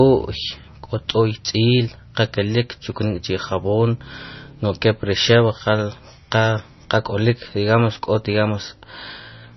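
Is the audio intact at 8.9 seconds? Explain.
No. At 8.9 seconds the speech carries heavy damage that runs through the whole clip, likely from MP3 compression. The sound is watery, pointing to a very low bitrate near 26 kbps, where weak frequency lines flicker on and off.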